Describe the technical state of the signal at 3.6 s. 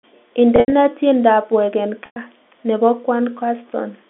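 At 3.6 s the signal is intact, with no fault present, and the speech comes through the ordinary narrow band of G.711 telephone coding.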